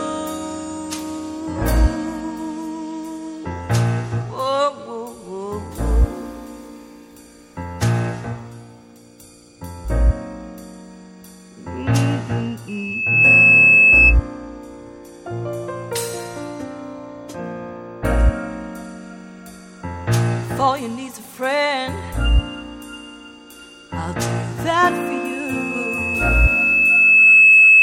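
A piercing tone near 2.6 kHz swells out of the sound at 12.68 s, reaching roughly 10 dB above the programme within about half a second before cutting off at 14.16 s; it returns at 24.86 s, climbing more slowly over about two seconds to some 15 dB above the sound and howling through to the end. This is loudspeaker feedback squeal: the microphone re-amplified its own loudspeaker until the loop gain at 2.6 kHz passed unity.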